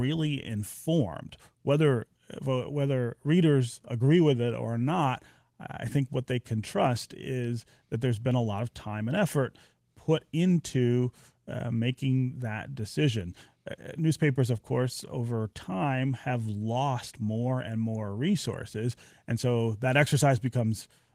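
It's a speech clip passed through Opus voice compression at 20 kbps in its hybrid mode, and there's nothing technically wrong to point to anywhere in it.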